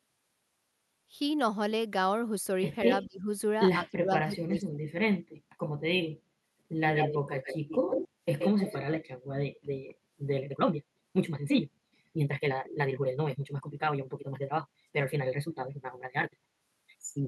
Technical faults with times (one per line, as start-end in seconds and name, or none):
2.85-3.29 speech suppressed in double talk
3.02-3.06 echo leak
3.81-4.93 speech suppressed in double talk
6.94-8.08 echo leak
8.10-8.20 background gated by the echo canceller
8.39-9.00 echo leak
10.37-17.27 time-stretched section